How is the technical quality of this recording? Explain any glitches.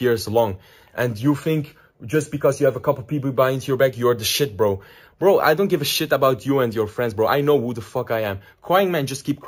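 The recording has one clear fault running through all of it: imaging from sample-and-hold upsampling. The sound fits a 16 kHz source raised to 48 kHz by simply repeating each sample, with no smoothing filter. That leaves a mirrored copy of the spectrum folded about 8 kHz, filling 8 to 16 kHz at about 20 dB below the main signal. It is heard as a bright metallic fizz that rises and falls with the sound, its lowest part moving opposite to any pitch changes. On a spectrogram the band above 8 kHz shows an upside-down reflection of the lower band. On a zoomed waveform each step is a small flat staircase of repeated values.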